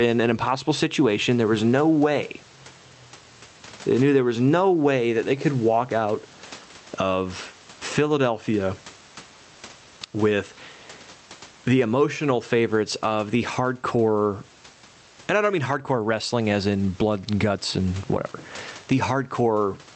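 Gain pumping runs through the whole recording, with the gain swinging roughly 15 dB. The likely cause is input gain set far too high, with a fast limiter or compressor clamping the level on each peak and then releasing it. The room noise sits about 35 dB below the speech. Loud and quiet passages are pressed toward one level, and the speech sounds squashed.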